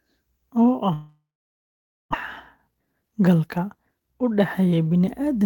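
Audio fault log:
0.93–2.15 s long network dropout: the sound smears into a fading buzz, then 0.89 s of silence, and 0.86 s never comes back, likely a network outage.
2.65–4.67 s jitter buffer speed-up: speech runs at 115% speed with unchanged pitch as tiny pitch-period slices get dropped, trimming roughly 0.3 s of built-up delay.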